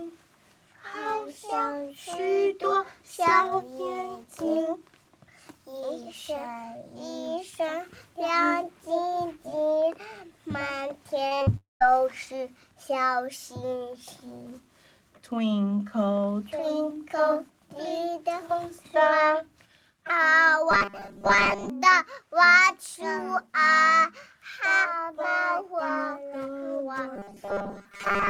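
From 11.27 to 11.49 s there is repeated packet loss (robotic sound): four separate holes, the longest 40 ms, with about half the span filled by continuing the previous sound. It comes out choppy. A spectrogram shows short, smeared, frozen slices interrupting the normal texture.

Immediately after, from 11.57 to 11.82 s, a long network dropout is the likely cause of a quarter-second gap. A decaying extension of the last sound fades into about 160 ms of silence, and the sound then resumes with that section missing. On a waveform this looks like a tapering tail followed by a flat line.

From 20.71 to 21.70 s, and again from 27.16 s to the end, the sound becomes a rigid 200 Hz buzz that loosely tracks the original. This is robotic sound from repeated short buffers, likely from a 5 ms slice being repeated over most of the span while the real audio is skipped. A spectrogram shows evenly spaced horizontal harmonics at 200 Hz intervals, and the waveform repeats the same 5 ms shape over and over.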